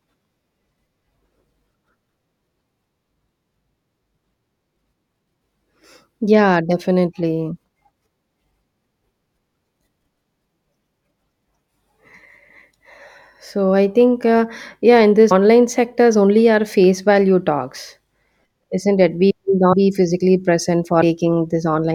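Speech with compressed frames skipped at 15.30, 18.30, 19.72 and 21.01 s: roughly 100, 50, 150 and 100 ms vanish, fitting whole 24 ms frames dropped. Each shows as a sudden spectrogram discontinuity.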